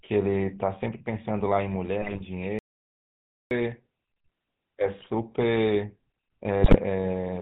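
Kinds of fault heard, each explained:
GSM full-rate codec: The speech runs through the original GSM coder, which models the vocal tract and excites it with sparse, regularly spaced pulses. Throughout, nothing passes above 4 kHz and the voice sounds plainly buzzy and gravelly, consistent with the 13 kbps full-rate mode.
GSM bit errors: Corrupted bits reaching the decoder scramble the filter, pitch and gain parameters, so individual frames come out with a warped spectrum or a level jump. The speech breaks into squawks and gargling at 2.01–2.22 s, 5.00–5.07 s and 6.62–6.77 s.
audio dropout to silence: From 2.59 to 3.51 s the sound cuts out completely, about 0.92 s of digital silence with no room tone, then resumes mid-flow. Input was lost while silence kept being written, likely through a failed link or disconnection, and that content is gone.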